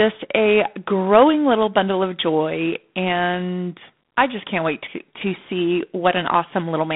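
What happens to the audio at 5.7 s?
G.726 ADPCM coding affects the audio at 5.7 s, as it does from start to end of the clip. The codec sends only a few bits per sample describing how each sample differs from an adaptive prediction, and the coarseness here fits the 24 kbit/s rate. The speech carries a harsh, rasping hiss that rises and falls with its level. The band runs from about 150 Hz to 3.6 kHz, with nothing above 3.8 kHz.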